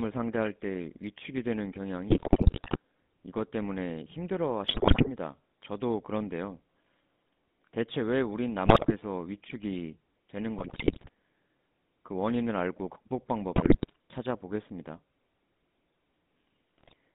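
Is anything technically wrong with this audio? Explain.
Yes. The speech has been through the GSM full-rate codec for its whole length. The line is band-limited to roughly 150 Hz to 3.7 kHz at 13 kbps. The codec models the vocal tract and excites it with a sparse pulse train, so voices come out buzzy and gravelly. A spectrogram shows nothing above 3.7 kHz and smeared, grainy harmonics.

GSM bit errors strike at 2.08–2.77, 4.64–5.09, 8.66–8.96, 10.58–11.09, 13.56–13.96 and 16.78–16.93 s. Corrupted filter, pitch and gain values warp the spectrum frame by frame. The result is squawks, pops and gargling, seen as sudden level spikes and distorted formant bands.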